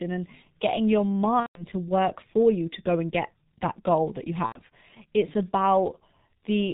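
Speech, heavily degraded by the G.723.1 codec at about 6.3 kbit/s, which sounds muffled and hoarse, with a spectrogram showing nothing above 4 kHz and smeared consonant onsets. VoIP packet loss concealed by the speech codec appears at 1.40–1.65 s and 4.46–4.61 s. Each gap turns into a fading, stretched sound, consistent with roughly 150 ms and 90 ms of lost 30 ms frames. On the waveform the envelope decays smoothly instead of tracking syllables, and the spectrogram shows repeated, frozen spectral patterns.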